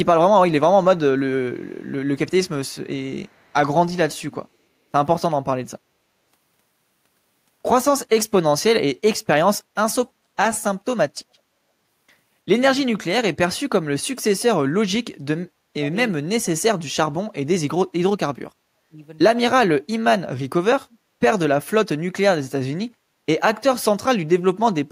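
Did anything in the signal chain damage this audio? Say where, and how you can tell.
Yes, both problems sit in call processing. There's an echo leak at 1.62–2.75 s and again at 3.23–3.53 s. A very faint copy of the speech trails 334 ms behind, around 40 dB down. That's likely the far end's echo canceller letting some loudspeaker pickup back into its microphone feed.

From 12.85 to 18.98 s you get speech suppressed in double talk. The talker's level dips, about four seconds altogether, with the deepest dips roughly 35 dB. The likely cause is the canceller failing to tell this talker from echo while both sides spoke, so it turned everything down.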